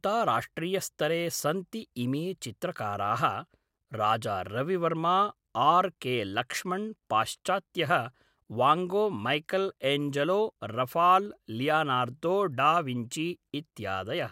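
At 11.26 s a single sharp click cuts through the speech, the sound of dropped samples: a fraction of a millisecond of the stream is likely missing, so the waveform jumps abruptly to a later value, drawing a thin vertical line across the spectrogram.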